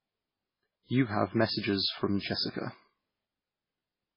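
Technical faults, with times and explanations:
Throughout, MP3 compression: the sound has nothing above 5.3 kHz, so it is dull and muffled, and heavy codec damage is audible across the whole clip. The likely cause is an MP3 encoder starved of bits, with the sound pointing to a very low bitrate of around 16 kbps. With so few bits, the encoder drops all treble above a fixed cutoff and discards weaker frequency components it judges unimportant, which degrades what remains.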